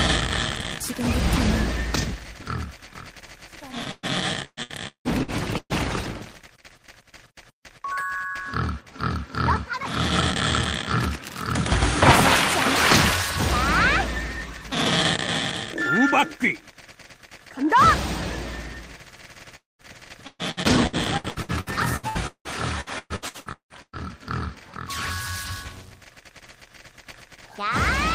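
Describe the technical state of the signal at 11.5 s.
At 11.5 s the signal is intact, with no audible technical fault at that moment.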